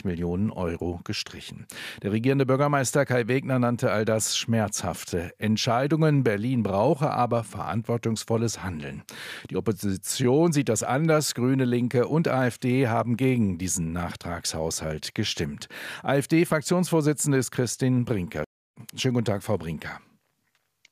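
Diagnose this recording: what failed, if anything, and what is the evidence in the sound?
Nothing in the chain failed.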